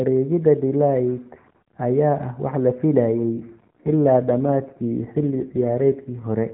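From 3.32 s to 6.27 s the speech turns rougher and more synthetic, with a buzzy texture, which points to an AMR rate drop from the 12.2 kbps mode to roughly 5.9 kbps as the network traded bits for error protection. There is no gap and the band stays put. On a spectrogram, energy still stops at 4 kHz, as with the narrowband mobile codec before, but harmonics look smeared and less distinct, while the waveform shows no break.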